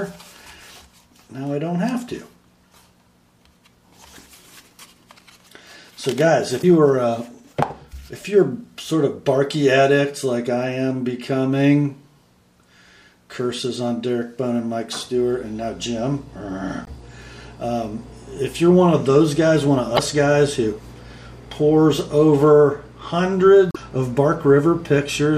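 At 6.60 to 6.64 s, 16.84 to 16.88 s, 19.95 to 19.99 s and 23.68 to 23.76 s, damaged data in a compressed stream makes the decoder misread frames and lose sync, searching for the next frame header.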